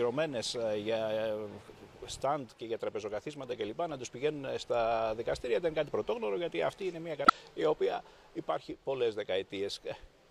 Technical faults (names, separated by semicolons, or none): damaged data in a compressed stream